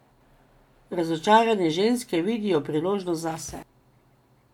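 No technical faults occur at any point in the speech, so there are none to describe in time order.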